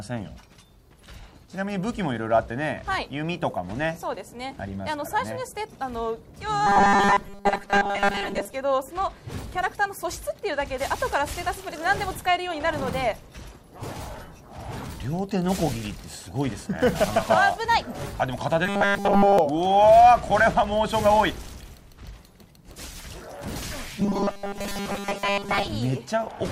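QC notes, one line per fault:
6.67–8.53 s, 18.66–19.39 s, 24.00–25.68 s: robotic sound from repeated short buffers. A rigid metallic 200 Hz buzz loosely tracks the sound, likely from a 5 ms slice looped while most real audio is skipped. Unlike dropouts, there are no gaps, only a fixed-rate buzz.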